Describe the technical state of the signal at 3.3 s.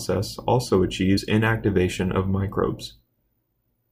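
The signal at 3.3 s is intact, with nothing wrong to be heard at that point.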